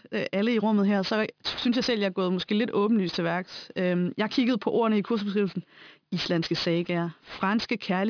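Aliasing runs through the whole of the speech. The sample rate was cut, which fits a drop to about 11 kHz, without first filtering out content above the new limit, so energy above 5.5 kHz folds back below it at wrong pitches, only around 15 dB beneath the speech itself. Sibilants turn gritty and metallic, and the spectrum stays full right up to 5.5 kHz. That sets it apart from plain band-limiting, which would sound dull and muffled instead.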